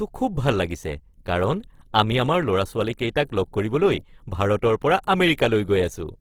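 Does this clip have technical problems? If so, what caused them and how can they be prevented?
Yes. Plainly audible Opus compression damage runs through the whole speech clip. The sound turns grainy and rough, though the full bandwidth survives up to about 20.3 kHz. This likely comes from Opus in its CELT mode at a low rate, which fits about 16 kbps. When bits run short, the encoder keeps each band's energy but fills in detail with folded or noise content. Encoding at a higher bitrate would prevent this.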